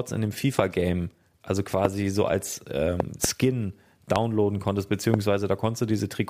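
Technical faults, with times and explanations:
0.59–0.61 s, 1.85–1.87 s, 3.00–3.27 s, 4.16–4.18 s, 5.14–5.16 s: loud pop, sharp thumps about 20 dB above the speech, the first after "in dem", the second just before "so als", and a double pop after "so als" at 3.00 s. The speech continues underneath. Each is likely a sudden voltage step from a plug, switch, static or driver glitch.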